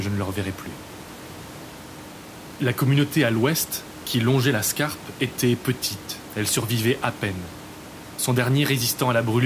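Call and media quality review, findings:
Nothing to flag on this speech recording; the only thing in the background is some room noise sitting about 21 dB under the voice, which belongs to the room, not the system.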